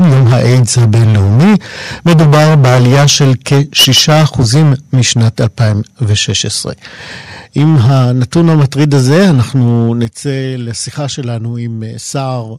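From the start to 1.56 s the speech shows microphone overload. The peaks break up with a harsh, crackling edge. The likely cause is an input level set far too high, driving the converter about 12 dB past its limit. A large share of samples have their tops sheared flat. The overload returns from 2.06 to 6.31 s, about 16 dB over, and here too a big portion of the waveform is flattened. At 3.02 s the microphone volume stepped down by 3 dB. Voice and background drop together in one jump. Call software likely reacted to the clipping by cutting the device's input volume. The distortion carries on regardless. At 7.57 s the overload starts again, now about 7 dB over and less dense. It lasts until 10.05 s. At 7.59 s another 3 dB step down follows, again likely triggered by the fresh distortion. At 10.05 s a much larger cut of 10 dB hits. The level falls sharply, and the crackle ends at that point.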